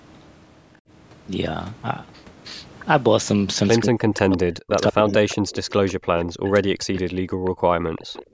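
From 3.82 to 5.34 s the speech sinks sharply, falling by roughly 40 dB at its deepest, with about a second and a half affected. This is speech suppressed in double talk: the far side was likely talking at the same moment, and the echo canceller, unable to tell this talker from its own loudspeaker's echo, pulled the microphone down. The same dipping returns, shallower, from 6.41 to 6.97 s at around 25 dB, and again as a brief dip near 7.81 s of roughly 15 dB.

Between 5.33 and 5.92 s, and again from 6.96 to 8.25 s, a faint trailing copy of the voice follows it at a fixed 182 ms lag, sitting about 20 dB under the main speech. That is an echo leak. The far end likely plays the call over a loudspeaker, and its canceller let part of what the microphone caught slip back down the line, so the speech returns as a delayed shadow of itself.

From 7.25 to 7.53 s the room tone behind the speech briefly vanishes, falling about 40 dB for around 150 ms before it recovers, and at 8.25 s it drops by about 17 dB through to the end. 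This is background gated by the echo canceller, which clamped the microphone hard while the loudspeaker was active. The bandwidth tops out at 8 kHz, in line with ordinary call microphone processing.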